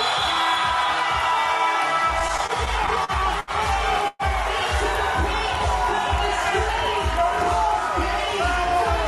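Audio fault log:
2.19–3.51 s, repeated stalls (stutter): packets kept arriving late, so the jitter buffer ran dry nine times. The receiver stretched the last sound over each wait, about 200 ms in all, the longest 73 ms. Nothing is lost, but the passage drags and stutters.
4.08–4.22 s, call audio freeze: delayed packets likely emptied the jitter buffer, and the receiver bridged the 118 ms wait by carrying the last sound on as a fading buzz or hiss, never reaching silence. Playback then resumes where it stopped, 118 ms later, nothing missing.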